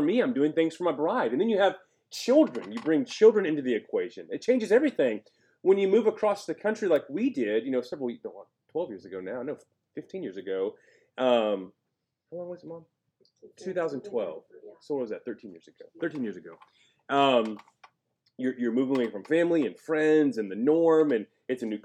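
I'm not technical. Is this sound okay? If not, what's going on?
Yes, nothing in this recording sounds wrong. There's no glitch, dropout or distortion to point to at any moment.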